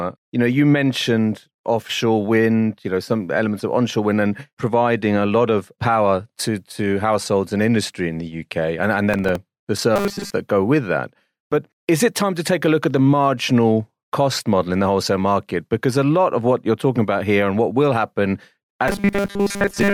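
From 9.14 to 9.36 s the processor misses a handful of very short buffer deadlines, replaying stale audio, producing a brief gritty processor overload crackle. Later, audio likely arriving too seldom gets filled by repeating roughly 5 ms snippets, covering most of the sound, giving robotic sound from repeated short buffers, a rigid metallic 200 Hz buzz, from 9.96 to 10.30 s and again from 18.88 s to the end.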